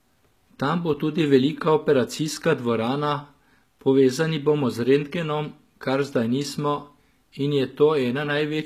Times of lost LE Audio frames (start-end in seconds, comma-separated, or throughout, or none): none